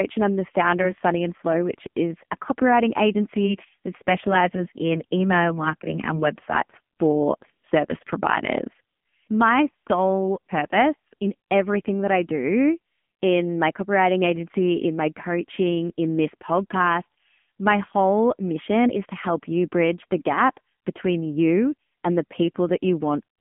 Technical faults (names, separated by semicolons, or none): AMR narrowband mobile codec